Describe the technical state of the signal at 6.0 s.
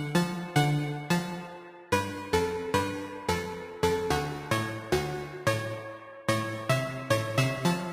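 At 6.0 s the audio is intact, with no audible fault at that point in the sound.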